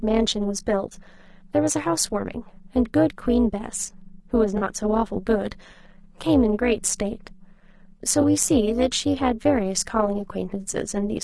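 Throughout the speech runs an overlap-add ripple: frames rejoined with uneven overlap gain make the level pulse by about 11 dB around 200 times a second, a metallic buzz with extra tones around each note rather than codec grain. Alongside it, grainy, rough harmonics and a thin, synthetic top band likely come from low-delay AAC compression (AAC-ELD), which fits a bitrate around 32 kbps. At 4.57–4.63 s (40 ms) and 8.21–8.25 s (20 ms), AAC frame loss with concealment leaves short smeared, noisy patches, filled from earlier spectrum rather than dropping to silence.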